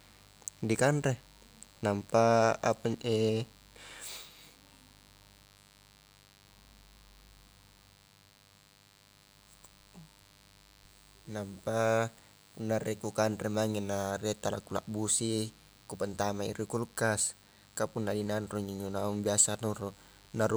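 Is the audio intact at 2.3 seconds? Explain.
No, not really. At 2.3 seconds, and in fact right through the clip, there's a mains buzz riding under the speech. Something like a dimmer, rectifier or poor shielding is letting sharp switching spikes into the signal twice per 50 Hz cycle, so you get a dense stack of 50 Hz harmonics climbing into the kilohertz range. It sits roughly 30 dB below the speech, a steady, raspy buzz rather than a smooth hum.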